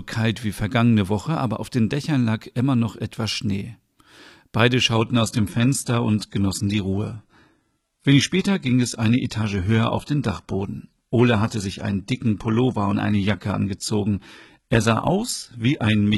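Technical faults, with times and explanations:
4.96–16.18 s, adaptive stream at a lower bitrate: playback switches abruptly and gaplessly to a leaner encoding, removing everything above 11.9 kHz and adding audible codec artefacts.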